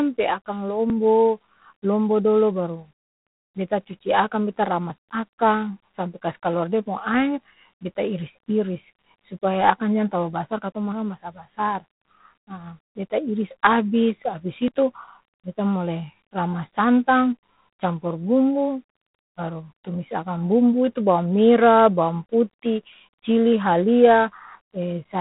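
G.726 ADPCM coding runs through the whole recording. Each sample is sent as a few bits of difference from an adaptive prediction, and the rasping hiss that rises and falls with the speech level fits the 24 kbit/s mode. Nothing passes above 3.9 kHz.

At 0.9 s and again at 14.68 s there is a sudden jump in the speech and no gap of silence. Roughly 20 ms of audio has vanished and the two sides are butted together, most likely a dropped buffer (overrun) where the program fell behind the hardware.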